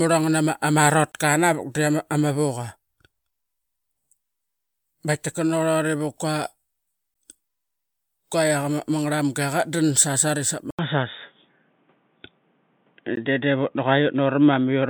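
There's a gap at a join of encoded pieces at 1.12 to 1.14 s, again at 7.14 s and 13.16 s, every 6 s. Untrimmed encoder padding leaves 16 to 23 ms silences with smeared edges. At 10.71 s there's an 80 ms dropout, then the speech turns dull, with nothing above 3.8 kHz, a level shift of about 5 dB and a faint new noise floor, likely from the input being switched to a poorer device.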